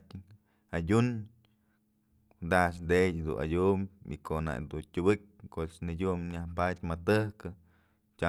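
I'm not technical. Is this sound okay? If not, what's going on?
Yes, this speech recording sounds okay. Nothing in it suggests a technical problem.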